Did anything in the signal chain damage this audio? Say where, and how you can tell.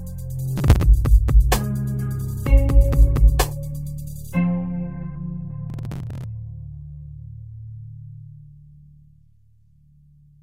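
Yes. Processor overload crackle from the driver or buffer stage at 0.58–0.83 s and 5.7–6.24 s. The processor missed dozens of buffer deadlines in a row, and each buffer of a few milliseconds was skipped, leaving hard-edged jumps in the waveform and dense vertical broadband streaks on a spectrogram.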